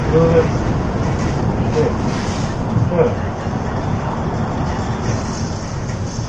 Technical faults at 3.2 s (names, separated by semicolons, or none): low-delay AAC compression